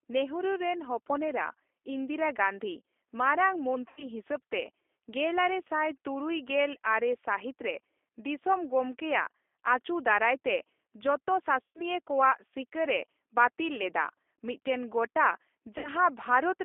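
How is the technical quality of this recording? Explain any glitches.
The quality is that of a narrowband phone call, with three brief dropouts.

The speech passes through a G.729 codec at 8 kbit/s, restricted to a 300 Hz to 3.5 kHz line band. The decoder rebuilds each frame from a vocal tract filter and sparse pulses, so the voice sounds muffled and distinctly rough and synthetic throughout.

VoIP packet loss concealed by the speech codec occurs at 3.88 to 4.07 s, 11.63 to 11.82 s and 15.78 to 15.89 s. Missing audio of about 90, 120 and 60 ms fits two to four lost packets. The decoder extends its last pitch and filter while fading the gain, producing a smeared, buzzy tone or a coloured noise that fades. The voice stays weak or distorted for a moment after each gap.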